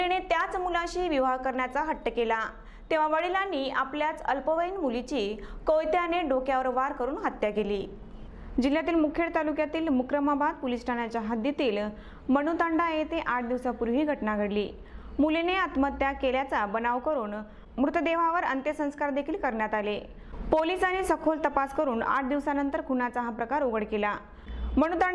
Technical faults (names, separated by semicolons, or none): none